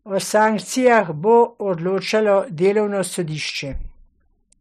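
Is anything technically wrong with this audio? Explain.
Yes, the speech hard-clips twice: 0.38 to 0.46 s, about 1 dB over, and 0.87 to 0.98 s, about 2 dB over, just before "bo odločalo delovno". Peaks exceeding the stage's limit are cut flat, spraying high harmonics as brief crackle on loud syllables, sharper than the rounded warmth of soft saturation.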